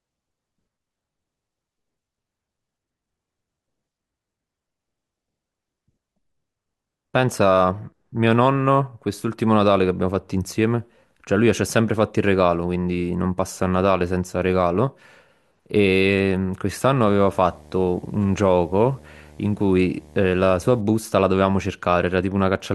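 From 17.05 to 20.81 s a low buzz at 75 Hz with a fizzy hash above it sits well beneath the speech. This is video or display buzz: a screen or its video cable is coupling into the audio path, buzzing at the picture's 75 Hz field rate.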